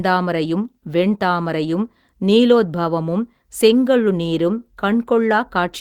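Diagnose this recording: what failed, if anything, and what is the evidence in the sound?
Through the whole speech clip the timing feels faintly unsteady, with small hiccups recurring at uneven intervals rather than at any fixed rate. This is clock drift between sender and receiver, located at the network and jitter-buffer stage. The sender's audio clock runs about 2% slow relative to the receiver's, so the jitter buffer keeps draining and the receiver must keep padding the stream to avoid running dry, which leaves the delivery slightly halting.

From 0.36 s to 5.61 s the speech runs at about 98% speed, with slight stretching and occasional tiny stumbles, all in the same lengthening direction. These are repeated timing corrections made by the receiver's buffer logic, which repeats short pieces of audio to stay in step with the slower sender. Across that stretch the repeats add up to roughly a tenth of a second. 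Each edit is small, so it comes through as an uneven tempo rather than clear glitches.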